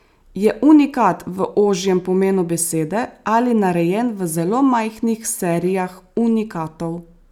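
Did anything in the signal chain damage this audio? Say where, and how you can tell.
No, nothing in the signal chain has damaged this speech recording. No stage shows any sign of harm.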